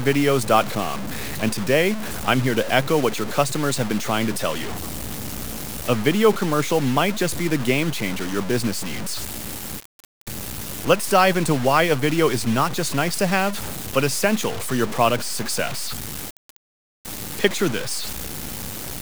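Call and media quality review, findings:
Heavy grainy distortion following the speech throughout, quietest parts sputtering out; likely low bit depth without dither, consistent with truncation to 5 bits.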